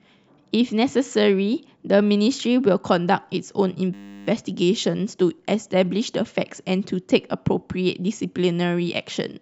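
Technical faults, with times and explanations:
3.94–4.27 s, system hang loop: the system or audio driver stalled while the sound hardware kept replaying the same 10 ms ring buffer, about 33 times over. That exact repetition at 100 Hz fuses into a steady buzz in place of the speech, with almost no audio lost.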